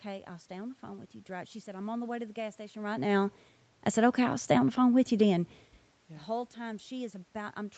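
No technical faults are audible.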